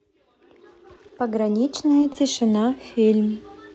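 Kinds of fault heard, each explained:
Short concealed packet loss: Twice, around 0.95 to 1.12 s and again near 1.07 to 1.11 s, about 20 ms of audio never arrived. The receiver continued the previous sound to cover each gap, then blended back. It is heard as a brief smear or wobble.
Short stall from a late packet: At about 2.13 to 2.17 s a packet came late and the jitter buffer ran dry. The last sound was stretched by about 20 ms until it arrived. Nothing is lost, but that moment is held slightly too long.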